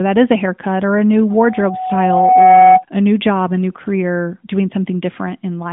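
Right after "haircut or a new", at 1.30 s, a loudspeaker feedback squeal starts creeping in: a single tone near 744 Hz that swells over about a second until it sits roughly 10 dB above the speech, then cuts off at 2.84 s just before "a new job a". The mic was hearing its own speaker, and at that pitch the loop gain went past one. All of it rides on a narrowband mobile line, probably AMR at its top rate, with nothing above about 3.8 kHz.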